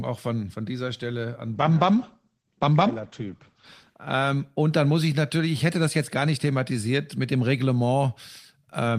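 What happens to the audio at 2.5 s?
A call bitrate drop runs from 1.54 to 4.99 s. The encoder falls from 32 to 12 kbps, coarsening the speech and cutting the highs above 8 kHz, so it sounds muffled and rough.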